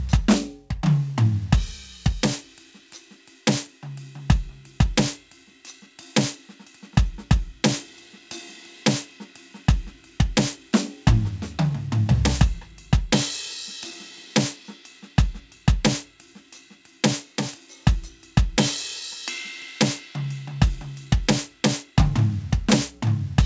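No faults in the music; the top end stops at 8 kHz and the lowest bass is trimmed, as expected from a wideband call microphone and codec path.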